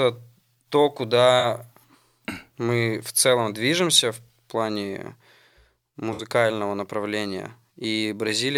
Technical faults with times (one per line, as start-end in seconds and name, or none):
1.39-1.45 AAC frame loss with concealment
6.13-6.23 AAC frame loss with concealment